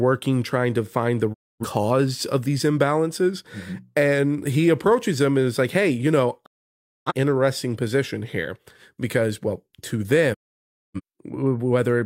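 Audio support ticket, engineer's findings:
Digital broadcast dropout: speech mutes at 1.32–1.64, 6.44–7.12 and 10.33–11.01 s. Receiver muting lost frames, with a 20 ms fade into clean silence rather than hiss, so not analogue fading.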